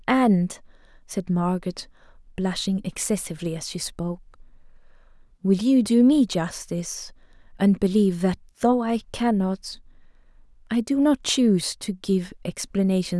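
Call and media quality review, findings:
No faults found in the speech audio. Nothing heard points to a failing component in the chain.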